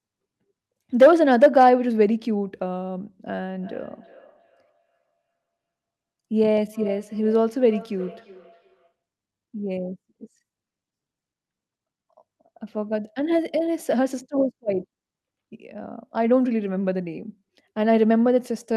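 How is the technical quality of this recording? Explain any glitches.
The speech recording has one glitch, a feedback echo between two devices from 3.56 to 8.93 s. Each phrase returns about every 0.4 s, peaking about 21 dB below the speech. A second device's playback is re-captured by another microphone that its canceller ignores. On a spectrogram these show as faint, thinning copies stacked at regular spacing.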